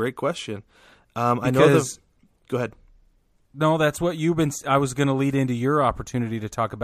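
Speech recording with no audible technical faults.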